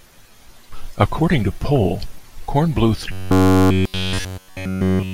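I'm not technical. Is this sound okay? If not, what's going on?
No. From 3.12 to 5.13 s there is robotic sound from repeated short buffers: a steady, metallic 94 Hz buzz with no silent gaps, unlike dropouts, likely from audio arriving too late.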